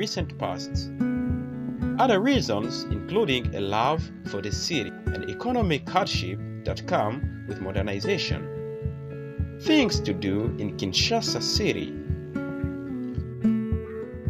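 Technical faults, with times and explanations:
Throughout: sample clock jitter. The converter's clock wanders by a few microseconds, so each sample lands slightly early or late, and the timing error turns into an amplitude error wherever the waveform moves fast. The result is a grainy hiss sitting roughly 30 dB below the sound, thickening on loud and bright passages and vanishing in pauses. A steady noise floor would stay audible in silence; this one tracks the signal's level and brightness.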